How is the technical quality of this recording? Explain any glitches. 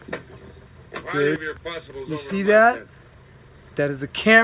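The recording has two timing glitches. It was carried over a call link whose telephone codec (G.711 A-law) leaves nothing above 4 kHz, so the sound is narrowband throughout.

Skip ahead, at 1.36 to 1.38 s: about a second of audio was dropped, either in transit or by an overflowing jitter buffer discarding a backlog while later audio was already queued. Playback jumps straight forward with no fill, so the sound on either side is spliced together abruptly.

Jitter buffer speed-up, from 3.08 to 4.40 s: the buffer was holding more audio than its target, so the receiver repeatedly cut out short pitch-period-length slices, removing roughly a third of a second in total. The sound runs at about 119% speed with its pitch unchanged, giving a hurried, rushed feel.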